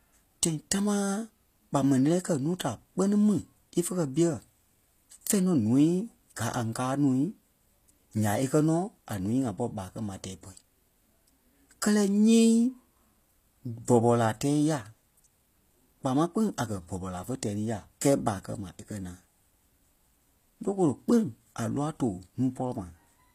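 From start to finish the speech carries plainly audible codec damage, likely from HE-AAC compression at a low bitrate, around 24 kbps. The treble is rebuilt from copied lower bands rather than the real thing, so s sounds come out gritty and metallic, and nothing survives above 14.9 kHz.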